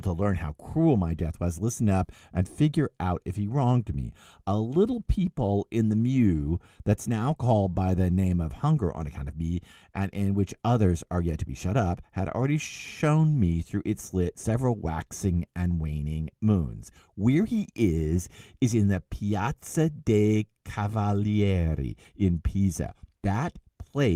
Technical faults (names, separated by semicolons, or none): none